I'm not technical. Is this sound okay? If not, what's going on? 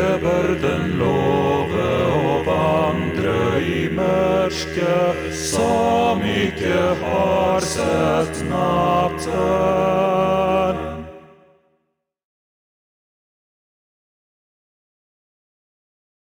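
No. The clock timing the recording ran unsteadily, so each sample was taken a few millionths of a second early or late. This sample clock jitter adds a faint hiss or roughness throughout, strongest on loud and bright moments and gone in silence.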